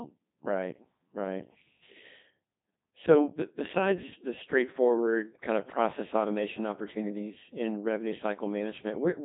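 A speech clip, heavily damaged by the Codec 2 vocoder throughout. The voice sounds robotic and buzzy. The decoder rebuilds it from sine waves using only pitch, voicing, energy and a spectral envelope, so the real waveform is lost. Nothing remains above 3.8 kHz. The codec runs at 2.4 kbit/s.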